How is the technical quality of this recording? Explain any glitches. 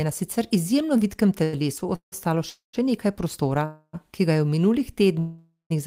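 The speech is repeatedly interrupted by timing glitches: one brief stall, then four audio freezes that get longer toward the end. Nothing is missing afterwards; the speech is delayed, not cut.

At 1.43 to 1.55 s, right after "na sicer izjemno vitkem", there is a short stall from a late packet. A packet came in late, the jitter buffer emptied, and the receiver held the last sound for about 95 ms until it arrived. This is heard as one drawn-out sound with a slight buzz or dip, and the speech resumes exactly where it stopped. Unlike the freezes that follow, it never fades into silence.

Call audio freezes occur at 1.95 to 2.14 s (just before "ostalo še nekaj prostora"), 2.50 to 2.75 s, 3.65 to 3.95 s (between "ostalo še nekaj prostora" and "ki ga je v"), and 5.19 to 5.72 s. Each was likely caused by packets held up in transit, which left the jitter buffer empty. At each one, the last sound continues as a fading buzz or hiss and then drops to silence. 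The inserted gaps last 165, 234, 279 and 510 ms, of which 110, 140, 60 and 160 ms are silent. The fade to silence and the greater length are what set these apart from the stall.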